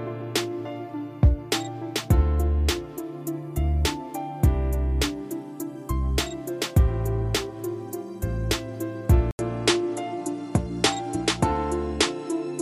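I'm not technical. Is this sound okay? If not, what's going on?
No. At 9.31 s there's a brief gap of 80 ms, then the sound loses everything above 11.4 kHz and carries a new, very quiet background noise through to the end. That points to an input switched to a poorer device, likely a different microphone taking over. Unlike a simple dropout, the sound doesn't return to how it was before, though the loudness stays the same.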